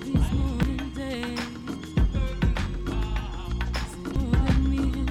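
At 0.63 s and again at 4.16 s, damaged data in the compressed stream produces a brief blip as the decoder misreads corrupted bytes, loses frame sync and hunts for the next header. A spectrogram would show a thin broadband vertical streak at each point, with a matching glitch in the waveform.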